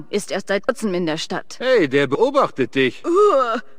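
Compressed frames skipped at 0.68 s and 2.15 s: the audio jumps ahead about 150 ms, then about 70 ms, consistent with roughly five and three lost 26.1 ms frames. Overlapping frames smear each join into a soft blip, seen as a vertical smudge and an abrupt waveform envelope change.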